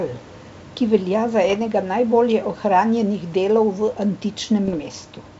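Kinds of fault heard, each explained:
Bit errors on an ADPCM link: Flipped bits upset the decoder's step size and predictor. Rough bursts of pops and level jumps follow, at 1.45–1.56 s and 4.64–4.94 s.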